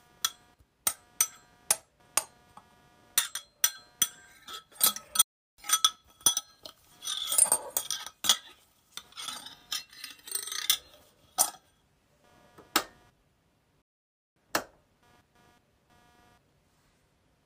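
A faint buzz runs under the whole clip. It is computer activity noise. Load shifts in the processor, graphics card or mouse disturb the ground that the audio circuit shares with them. That disturbance leaks into the output as a rough pulse, repeating at around 200 Hz. It sits well below the main sound, roughly 35 dB down. It rises and falls with the machine's workload, not with the audio itself.

At 5.22 s the sound cuts out abruptly. Silence lasts about 0.36 s, until 5.58 s. Then the audio resumes. The same thing happens again at 13.82 s. This gap is longer, about 0.54 s, ending at 14.36 s. Both are playback stalls. The sound halts in mid-flow and then carries on. The likely cause is the player running short of data, or its thread being blocked, so nothing reached the output until it recovered.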